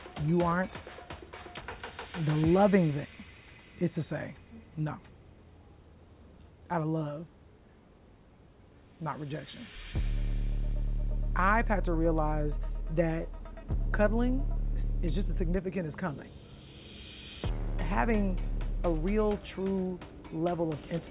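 Nothing goes wrong anywhere in this audio, so there's no technical fault to point out.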